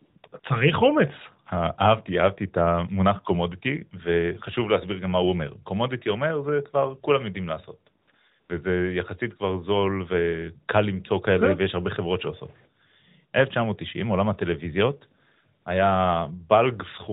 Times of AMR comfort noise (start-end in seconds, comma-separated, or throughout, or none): 0.00-0.44, 8.02-8.14, 8.40-8.50, 15.62-15.66